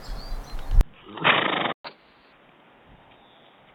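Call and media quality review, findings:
Sound turns dull and boxy at 0.81 s, after a 20 ms gap, through to the end. Likely an input switched to a poorer device. Level about 10 dB lower. New background noise, roughly 35 dB below the signal.

Sound drops out from 1.73 s to 1.85 s. Gap of 120 ms. Probable component: output player. Likely a playback stall, with the buffer running dry or the playback thread blocked.

Sound runs fast and high from 1.85 s to 2.33 s. Catch-up at higher speed, at 1.25x. Pitch raised by about four semitones. The player resamples its backlog after the stall, then returns to normal speed.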